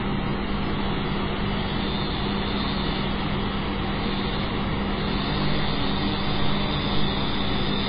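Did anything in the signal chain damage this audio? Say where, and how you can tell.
Yes, at the codec stage, likely a heavily starved MP3 encode, affecting the whole clip. Nothing survives above 5 kHz, a hard treble ceiling, which fits a bitrate around 16 kbps. With so few bits, the encoder zeroes weak frequency lines, and they flicker in and out from frame to frame. That gives the audio a watery, swirling texture with metallic chirps on bright content, and sharp onsets come out smeared.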